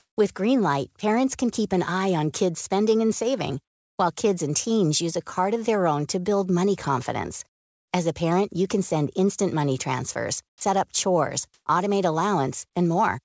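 From the very start to 0.17 s, the background is a smooth, featureless hiss rather than the room's real texture, and its level jumps by about 14 dB when the actual background takes over. The same comfort noise in place of the background returns from 10.49 to 10.61 s, between "send instant money transfers" and "up chores automate", with a level change of only about 2 dB. It appears again from 11.54 to 11.66 s, just after "up chores", where the step is a much more obvious 25 dB. The likely cause is discontinuous transmission: with no voice detected, the sender stopped sending, and the receiver filled each gap with synthetic noise. In this clip that noise sits far below the loudest sound, roughly 66 to 70 dB down.

At 10.59 s, the sound before "up chores automate" begins abruptly, without its soft lead-in. This is an onset clipped by the voice detector. The detector was likely slow to register that sound had resumed, so the first 20 ms were never sent, and comfort noise took their place. 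Throughout the clip, the call path's G.722 coding leaves nothing above 8 kHz.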